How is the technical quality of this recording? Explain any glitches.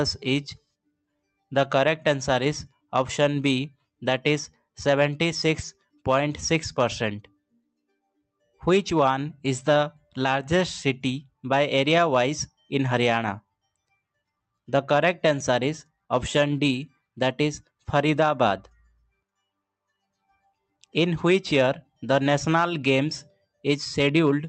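The recording has two short dips where the noise suppressor cut real sound. It passes through a call path whose top end stops around 8 kHz. From 7.22 to 7.69 s, and again from 18.7 to 19.23 s, sound was cut by the noise suppressor. It mistook sound for noise and turned it down, by about 21 dB at the deepest point. For roughly a third of a second, then for a bit under half a second, the level sinks.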